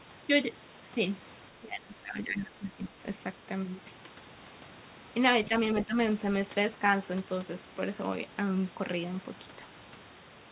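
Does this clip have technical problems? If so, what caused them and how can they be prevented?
Yes. The speech dips twice. From 1.51 to 2.97 s it drops by about 15 dB, and from 5.74 to 5.97 s it dips again by about 10 dB. That pattern is likely speech suppressed in double talk: both ends were talking, so the echo canceller couldn't tell the local talker from loudspeaker echo and turned the whole signal down. The narrowband sound with nothing above 4 kHz comes from the telephone-grade call codec, not from this fault. To prevent it, use headsets or a better-tuned echo canceller so the suppressor can tell echo from real double talk.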